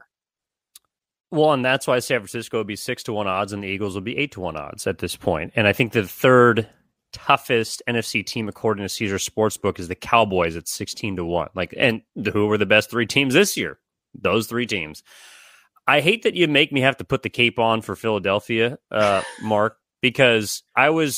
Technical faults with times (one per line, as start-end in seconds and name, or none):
none